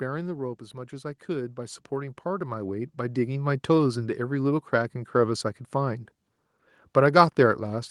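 From 0.72 to 3.74 s, an automatic gain rising fault occurs: the gain control judged the incoming level too low and kept turning its gain up over roughly three seconds, adding about 11 dB in total. Because the boost applies to the whole signal, the speech and the background noise behind it swell together, so the recording seems to creep closer and louder, with the background growing as much as the voice.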